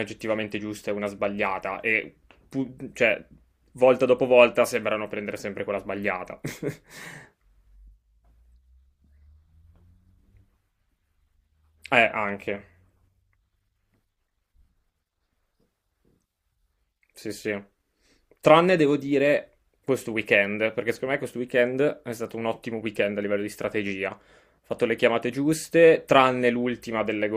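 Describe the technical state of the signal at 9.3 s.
At 9.3 s the speech signal is intact, with no audible technical fault at that moment.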